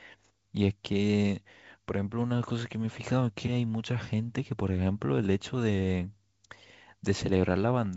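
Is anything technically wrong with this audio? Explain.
No, nothing's wrong here: the speech just carries the usual character of G.722 wideband telephone coding at 64 kbit/s, with any trace of the codec faint at most.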